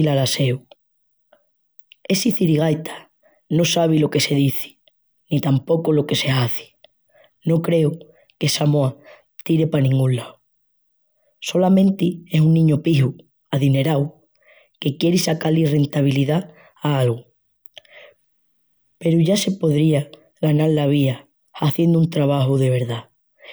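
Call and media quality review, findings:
No call or media quality findings to report for this speech recording.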